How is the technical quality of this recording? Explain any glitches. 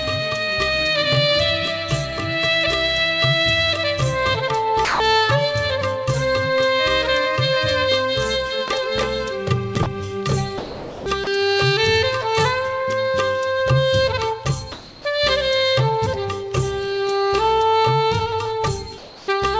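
The recording has two recurring glitches: short stretches where the sound itself drops out, and pauses where the real background is swapped for synthetic noise. Everything sits below 8 kHz, consistent with a wideband call codec such as G.722.

Sound dropped by the voice detector, at 4.85–5.00 s, 9.83–9.86 s, 10.58–11.06 s and 11.24–11.27 s: the sender's voice detector likely judged wanted sound to be background and stopped transmitting. The receiver filled the gaps with comfort noise, so the sound vanishes into a flat hiss for 30 to 480 ms before returning.

Comfort noise in place of the background, at 14.72–15.05 s and 18.98–19.28 s: during pauses the sender likely went silent apart from occasional updates, and the receiver generated noise modelled on the background. The real background, about 22 dB below the loudest parts, becomes a smooth, featureless hiss at nearly the same level, about 1 dB quieter in the second stretch.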